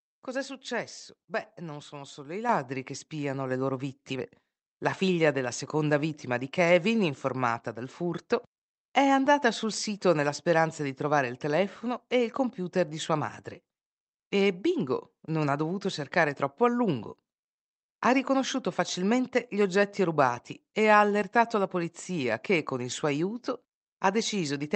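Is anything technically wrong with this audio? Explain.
Yes, the microphone volume gets stepped up twice. At 2.49 s and again at 3.51 s, automatic gain control bumps the input, so speech and background jump together, by about 6 dB and then about 4 dB.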